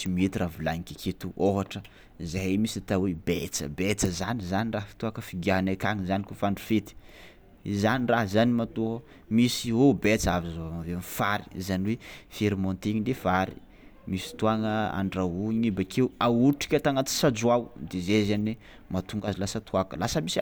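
One channel drops out from 19.20 to 19.28 s, near the very end of the speech. For those 80 ms or so, the level falls abruptly by about 6 dB and then returns just as suddenly, a brief dip in loudness with the sound otherwise unchanged. The likely cause is one side of the stereo signal cutting out briefly, so that once the channels are summed to mono only half the shared content remains.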